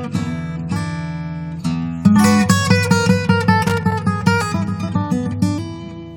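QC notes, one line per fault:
3.67–3.92 s, loose connector crackle: a worn or dirty contact repeatedly makes and breaks, chopping the signal into an irregular burst of scratchy crackle. The waveform shows jagged dropouts and sharp spikes, and the spectrogram shows scattered broadband vertical streaks across this quarter-second.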